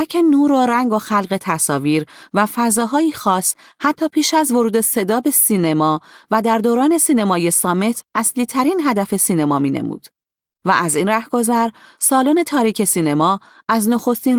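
No technical faults are audible.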